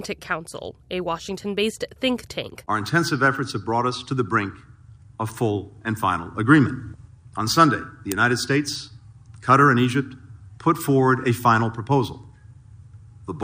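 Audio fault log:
0.11–13.39 s, clock slip clicks: The likely cause is two devices running on separate, unsynchronised clocks that differ by around 400 ppm. The difference adds up to a whole sample about every 0.05 s, so a single sample is dropped or repeated each time. That gives around two hundred slips in steady succession, about twenty per second, heard as faint regular ticks or a soft rattle, clearest on loud high or sustained notes.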